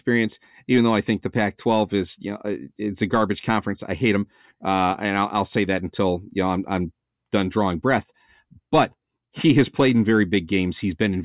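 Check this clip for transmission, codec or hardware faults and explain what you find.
I found no faults to report in this clip.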